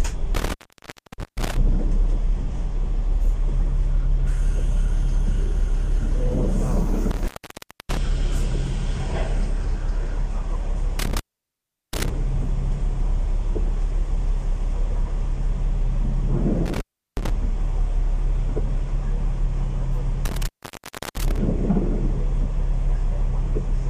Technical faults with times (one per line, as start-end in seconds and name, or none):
0.35-1.57 intermittent contact
7.11-7.97 intermittent contact
10.99-12.10 intermittent contact
16.66-17.30 intermittent contact
20.25-21.38 intermittent contact